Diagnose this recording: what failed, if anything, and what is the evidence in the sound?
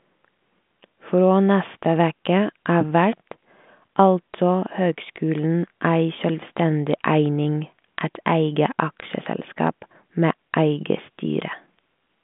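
Nothing has failed here: the speech arrives over a G.726 ADPCM link at 40 kbit/s, with the telephone band running from about 150 Hz to 3.5 kHz and nothing above 3.8 kHz, and any coding roughness is faint at most, which is just how that path normally sounds.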